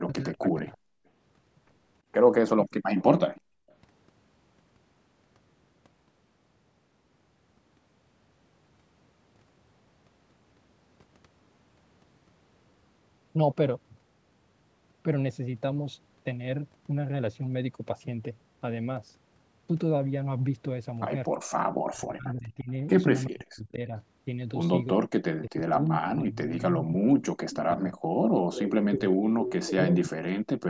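From 0.02 to 0.69 s the speech dips and breaks up, falling by roughly 35 dB for about half a second in total. This is speech suppressed in double talk, likely because the echo canceller, faced with both sides at once, turned down everything. Overlapping it, from 0.2 to 0.77 s, a faint delayed copy of the voice trails about 333 ms behind, roughly 30 dB under the speech. This is echo leak, likely loudspeaker sound the far end's canceller failed to remove. From 0.97 to 1.06 s the room sound briefly drops out by about 40 dB. That is background gated by the echo canceller, which clamped the microphone while the loudspeaker played.

From 2.99 to 3.75 s the echo returns at a 335 ms delay, about 25 dB down. Inside that stretch, from 3.41 to 3.67 s, the background vanishes again, by about 37 dB. From 21.5 to 22.72 s a weaker echo, about 35 dB down, follows at 348 ms. From 21.87 s to the end, the speech is repeatedly ducked and chopped, by up to about 40 dB, for roughly five seconds in all. 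This is double-talk suppression once more. Within it, from 27.51 to 29.66 s, the echo grows prominent, only about 10 dB below the speech, at a 353 ms delay.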